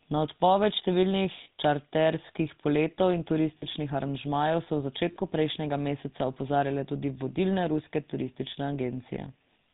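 The whole clip runs through the GSM full-rate codec, and you can hear it from the first syllable: that buzzy, gravelly roughness of a vocal-tract model driven by a sparse, regularly spaced pulse train, with nothing surviving above 4 kHz. The damage is plainly audible, and the dull, grainy character fits 13 kbps full-rate coding, where the excitation is thinned to every third sample.

Then there are three short dropouts, lost GSM frames each time, about 40 ms apiece, which fits two lost frames. The first sits at 1.44 to 1.48 s, right after "odpoved številnih" and before "čarterskih poletov in". The second is at 3.58 to 3.65 s, just after "številnih čarterskih poletov in". The third lands at 5.12 to 5.16 s, between "so v" and "prejšnjega meseca opozarjale tudi". In each gap the decoder reuses the last good frame's settings, so instead of silence you get a brief rough, metallic ring smeared over the hole.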